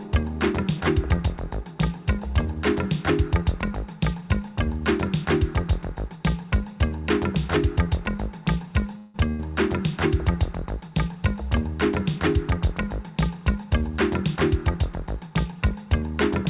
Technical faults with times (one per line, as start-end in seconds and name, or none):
8.98-9.41 call audio freeze
13.51-14.37 jitter buffer speed-up